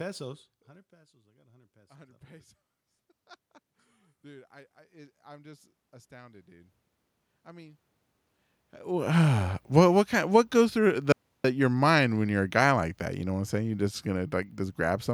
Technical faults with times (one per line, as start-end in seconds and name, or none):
0.90-2.57 automatic gain rising
4.21-6.78 automatic gain rising
11.12-11.44 audio dropout to silence